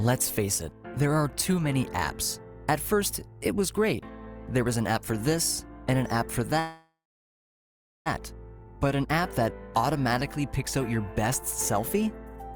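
Packets were likely held up in transit, starving the jitter buffer and causing a call audio freeze from 6.59 to 8.08 s. The last sound is stretched into a fading buzz, then about 1.06 s of silence, before the audio resumes where it stopped, with nothing lost.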